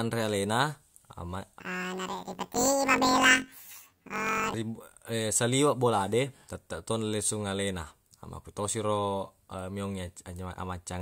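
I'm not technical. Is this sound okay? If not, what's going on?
No. From 1.6 to 4.54 s, planar audio was read as interleaved: stereo chunks were scrambled, so the speech jumps an octave higher with a fast robotic buzz, about 46 times a second.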